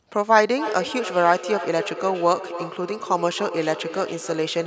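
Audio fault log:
0.53–4.66 s: feedback echo between two devices. Each phrase returns at a steady interval of roughly 0.3 s, peaking about 10 dB below the speech and ringing thinner with each pass. A second device on the call is playing this microphone's signal back into the room, where the microphone catches it again, and neither device's echo canceller removes sound the other one plays. On a spectrogram each syllable shows a fainter, narrower copy following at that delay, and the waveform shows a smaller delayed burst behind every word.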